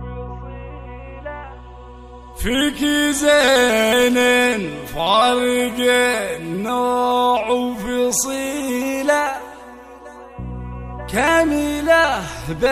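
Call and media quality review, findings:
No audible faults found in this recording.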